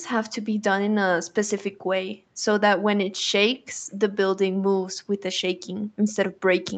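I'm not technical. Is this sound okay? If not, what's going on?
Yes, the sound is okay: it has come through an ordinary call connection, which leaves nothing above about 8 kHz and so gives it the slightly narrower tone you'd expect on a call, with no technical faults to point to.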